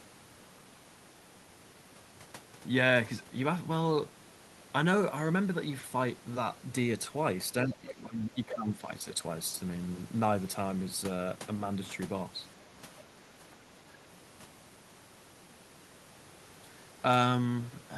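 Speech suppressed in double talk, 7.63 to 9.07 s: the talker's speech dips and thins in patches totalling about a second, at worst about 15 dB down. The likely cause is that the echo canceller could not separate its own talker from the loudspeaker echo and turned both down together.

Other side's voice leaking through, 8.50 to 8.55 s, inside that stretch: a brief scrap of a second voice sits about 10 dB below the talker. It is likely leftover loudspeaker sound that the echo canceller failed to strip from the microphone signal.

Speech suppressed in double talk again at 13.61 to 13.67 s: a much smaller dip of a few decibels, lasting well under a tenth of a second. It likely comes from the canceller briefly ducking the talker while the far side spoke.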